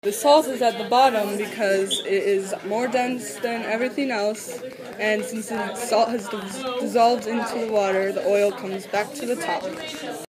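Something in the chain, likely interference from nearby equipment or a faulty connection or power supply, begins injecting short pulses at 4.73 s and keeps it up until 9.96 s, producing a train of clicks. They arrive at about 7 per second but at an uneven pace, around 40 in total, each with much the same sharp shape and peaking a few decibels above the sound itself. The result is an irregular ticking and popping laid over the audio, audible through quieter moments as well.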